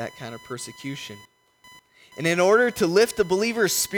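A speech recording carrying computer activity noise for its whole length: a buzzing, chirping layer pulsing at around 1 kHz, roughly 25 dB below the speech. It tracks the machine's processing load rather than the talker, as load currents disturb the ground shared with the audio circuit.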